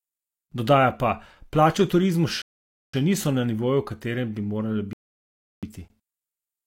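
At 2.42 s, after "v turizmu", the speech stops dead for 0.52 s, then resumes with "niso na nivoju v"; a second rebuffering stall at 4.93 s adds 0.70 s. Playback starved of data and waited, losing nothing. Both gaps show as flat-line waveform and blank spectrogram columns.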